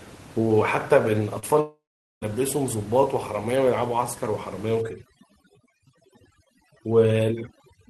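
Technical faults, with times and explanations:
1.39 to 1.44 s, short concealed packet loss. About 40 ms of audio arrived too late for the decoder. It filled roughly 30 ms by continuing the preceding sound, then blended back into the real signal. This is heard as a brief smear or wobble.
1.60 to 2.29 s, long network dropout. The likely cause is that audio stopped arriving for over half a second. The last sound is stretched into a fading buzz, followed by about 0.42 s of silence. Audio then resumes with about 620 ms missing.
4.82 s to the end at 7.89 s, overdone noise removal. The room noise, about 20 dB below the speech, is pushed toward silence, leaving twinkling specks. Frequency bands near the noise estimate are switched off, taking quiet speech detail with them.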